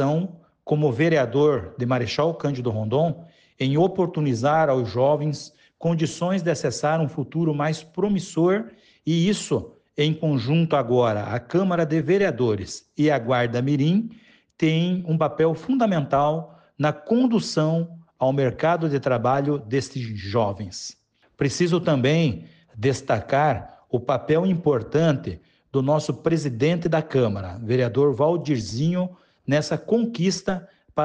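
No technical faults are audible.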